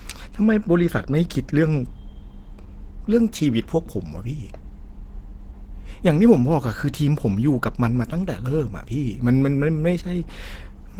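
Throughout the speech, the signal has likely been squeezed through Opus compression at a very low rate. The sound fits about 16 kbps, with the encoder in its hybrid mode: a speech coder carries the lower band while band-energy coding fills the upper range. The damage is plainly audible. The speech comes out muffled and hoarse, and its upper range turns grainy and rough, even though content still extends to about 20.4 kHz.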